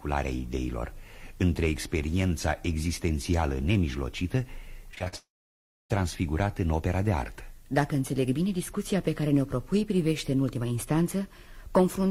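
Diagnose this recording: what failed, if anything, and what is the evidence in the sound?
From 4.91 to 5.14 s the audio turns choppy and robotic: five short holes in the network stream, the longest 45 ms, each patched by the receiver extending the last sound before the next loss arrives. Roughly half of that 0.23 s span is concealment rather than real audio. This is repeated packet loss, and the robotic sound comes from many brief repairs in quick succession. A single long outage would instead produce one fading buzz.

Immediately after, from 5.16 to 5.92 s, about 0.74 s of audio never arrives. A short smeared continuation of the last sound decays, and about 0.65 s of near-silence follows. The sound then resumes with that stretch missing. The cause is likely a long network dropout. It differs from the preceding stretch in having one continuous gap that the receiver could not bridge, instead of many short ones alternating with real audio.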